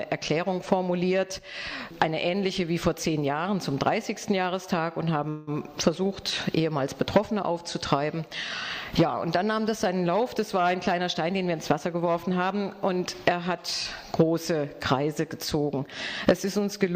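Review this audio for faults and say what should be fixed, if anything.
A call audio freeze occurs from 5.29 to 5.49 s. For about 177 ms the sound stops progressing, and the last moment is held and stretched into a fading buzz or hiss that never drops to silence. When the sound resumes it picks up exactly where it left off, so nothing is lost but a delay of about 177 ms is inserted. The likely cause is delayed packets draining the jitter buffer, which forced the receiver to fill the gap. Preventing it requires a network path with less delay variation, or a jitter buffer deep enough to absorb spikes of this size.

A jitter buffer speed-up runs from 10.77 to 12.81 s. Over those two seconds the audio plays at about 108% speed with its pitch unchanged, enough to sound hurried. The receiver was holding more buffered audio than its target, so it repeatedly cut out short pitch-period-length pieces, removing roughly a fifth of a second in total to pull the latency back down. 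To prevent it, smooth packet delivery so bursts don't overfill the buffer, and have the buffer shed excess delay more gradually or during low-level passages.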